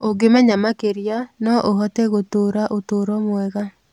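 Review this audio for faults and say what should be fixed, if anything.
Nothing here needs fixing, as the speech signal stays steady and intact throughout, with no audible disturbance at any point.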